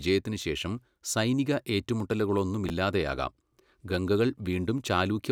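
At 2.66 s, a block of audio about 10.7 ms long reached the output late and was played three blocks after its proper place. This is the fault known as chunks out of order. Nothing is missing, but from 2.66 to 2.70 s the speech runs in the wrong sequence, with three hard joins where mismatched waveforms meet. It sounds like a brief jumbled stutter.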